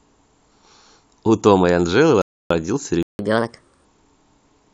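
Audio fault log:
2.22–2.50 s, rebuffering stall: the speech cuts cleanly to silence for about 286 ms, then picks up exactly where it left off. Nothing's missing, just time added, because the player ran dry on downloaded audio and sat waiting for more to arrive.
3.03–3.19 s, playback stall: another dropout, about 164 ms of dead air right in mid-flow before the speech comes back, likely the player starving for data or its output thread getting blocked.
3.19–3.85 s, catch-up at higher speed: right after that second gap the speech runs at 1.25 times normal, pitched up by about four semitones, then settles back. The player is resampling its backlog faster to claw back the lost time.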